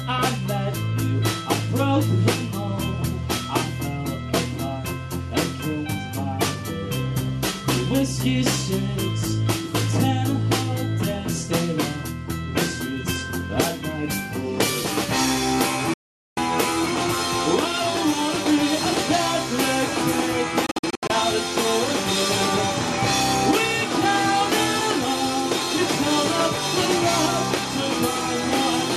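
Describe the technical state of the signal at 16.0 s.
At 16.0 s the signal is in a digital broadcast dropout, muted from 15.94 to 16.38 s. The receiver lost valid frames. The sound fades out within 3 ms, and 0.43 s is missing.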